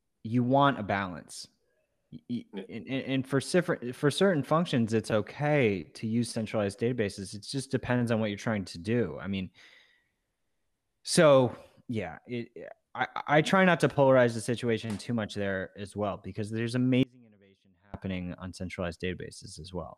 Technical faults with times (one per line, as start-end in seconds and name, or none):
17.03-17.94 audio dropout to a faint residue